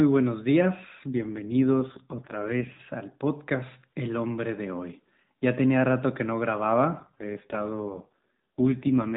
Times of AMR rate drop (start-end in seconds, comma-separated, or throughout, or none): 1.08-2.83, 7.00-9.16